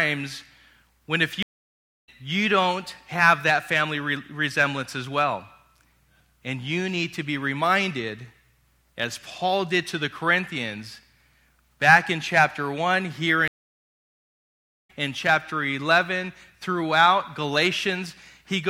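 Stream reconnects at 1.43 to 2.09 s and 13.48 to 14.91 s: the connection dropped, leaving about 0.64 s and then 1.4 s of silence while a fresh decoder started mid-stream. The audio resumes roughly 0.7 s and about a second further on, so material is skipped.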